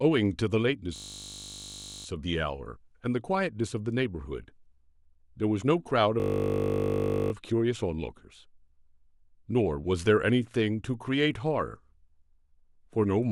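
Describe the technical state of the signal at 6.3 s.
At 6.3 s a system hang loop (6.2–7.32 s) repeats one 20 ms slice exactly, giving a steady 50 Hz buzz rather than a machine-gun stutter or silent dropout.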